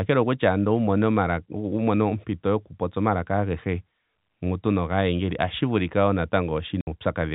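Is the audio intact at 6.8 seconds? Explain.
No, there's packet loss filled with silence from 6.81 to 6.87 s: a 60 ms hole, consistent with two lost 30 ms packets, cut in with hard edges.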